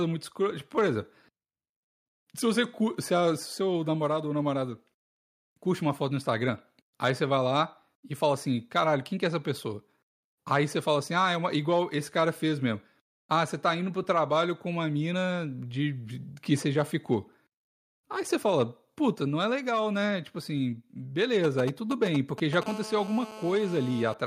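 From 21.44 to 22.64 s there are GSM signalling bursts: a nearby 2G phone's radio pulses get rectified, giving a galloping run of ticks and short 217 Hz buzzes, roughly 10 dB under the speech. Right after, from 22.66 to 24.14 s, it becomes steady GSM phone buzz as the call connects: a raspy 217 Hz drone full of harmonics, about 15 dB under the speech.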